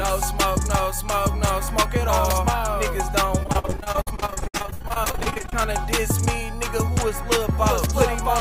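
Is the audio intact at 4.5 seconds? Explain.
No. At 4.5 seconds the audio sits inside a run of repeated packet loss (robotic sound) lasting from 3.39 to 5.56 s. Packets keep going missing, about 45 gaps, none longer than about 67 ms, and each hole is filled by stretching the preceding sound. Nearly half the span is concealed, so it turns choppy with pieces missing. A spectrogram shows smeared, repeated harmonic slices and abrupt edges. The waveform shows a stuttering, looped texture.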